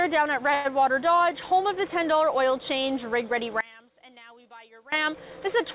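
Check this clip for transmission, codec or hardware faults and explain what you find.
Two faults can be heard. Both sit on a narrowband call path whose 4 kHz ceiling fits G.711 mu-law at 64 kbps.

From 0.54 to 0.72 s there is a call audio freeze. Packets were likely held up in transit and the jitter buffer ran dry. The receiver extended the last sound for about 106 ms as a fading buzz or hiss, then resumed where it stopped, so the rest arrives roughly 106 ms late and nothing is lost.

From 3.61 to 4.92 s, one channel is inverted. One stereo channel likely had its polarity flipped, so the shared centre content cancels in a mono sum. The level drops by about 23 dB, leaving only a faint remainder of the difference between the channels.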